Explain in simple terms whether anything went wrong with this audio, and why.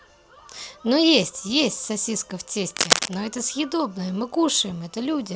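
Something did go wrong here. From about 2.70 to 3.14 s, a burst of cable scratch noise rides over the speech: a rough, crackly rustle, roughly as loud as the speaking itself, lasting under half a second. The likely culprit is a worn cable or connector being nudged during recording. When it shifts, its electrical contact flickers rapidly between good and bad, and those quick changes come through as uneven scratching layered on top of the voice.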